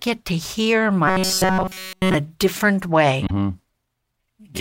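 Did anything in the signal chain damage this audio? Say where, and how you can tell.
Yes. From 1.08 to 2.15 s, between "to hear" and "different way", the speech becomes a rigid, metallic buzz at 188 Hz. That is robotic sound from repeated short buffers, likely a driver or buffer stage starving. All of that stretch is a repeated segment of about 5.3 ms, which sets the pitch.

A second fault follows "different way", at 3.25 to 3.31 s. This is damaged data in a compressed stream, at the codec or storage stage. Corrupted bytes broke the frames there. The decoder lost sync and had to find the next valid frame header, leaving a brief glitch.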